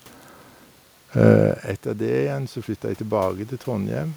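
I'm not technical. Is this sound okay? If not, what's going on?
No. From 1.84 s to 4.12 s there is automatic gain rising. Shortly before, around one and a half seconds in, the talker moves away from the microphone and the voice drops noticeably. The system's automatic level control responds by slowly turning its volume up over those two seconds, so the voice and the background room noise swell louder together. That gradual, even lift of both is the giveaway.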